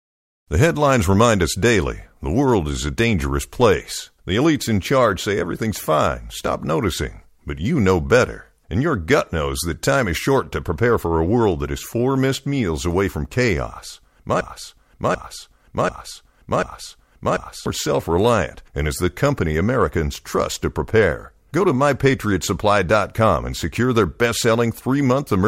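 Speech, with a broken-record loop from 14.41 s to 17.66 s. A fragment of about 0.74 s plays four times in a row, identical each time. The speech that belonged in that stretch never arrives. A stalled player, encoder or stream likely kept resending its last buffered piece.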